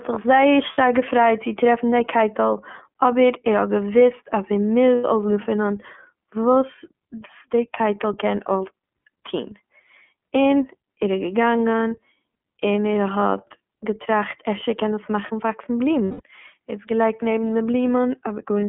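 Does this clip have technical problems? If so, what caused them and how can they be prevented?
Yes. The whole clip is speech coded with the iLBC codec. The band stops near 200 Hz and 3.4 kHz, and the voice sounds rough and slightly synthetic, which fits iLBC's 30 ms mode at around 13.3 kbps. A spectrogram shows nothing above 3.4 kHz. Keeping a wideband codec on the path prevents this.

Lost iLBC frames appear at 0.72–0.78 s (60 ms), at 4.95–5.05 s after "האט געוואוסט אז ער" (90 ms), and at 16.05–16.21 s after "קען עס מאכן וואקסן" (150 ms). Each gap fits whole 30 ms frames. During each gap the decoder repeats the last pitch cycle mixed with noise, which sounds like a held, buzzy vowel, and the voice recovers at once. On a spectrogram the gaps show as flat, repeated harmonic stripes, and the longest one fades toward its end. Using jitter buffering and forward error correction on the network would prevent these losses.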